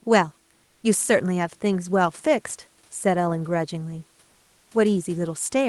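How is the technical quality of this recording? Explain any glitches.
The speech sits about 39 dB above the room noise, and its top end stops near 12 kHz, which fits an Opus call path. Two glitches stand out. From 0.63 to 0.83 s and from 4.31 to 4.71 s, the room background gives way to comfort noise: a smooth, featureless hiss, about 6 dB and about 2 dB quieter respectively. This likely comes from Opus discontinuous transmission, where the sender goes silent in pauses and the receiver synthesises filler noise.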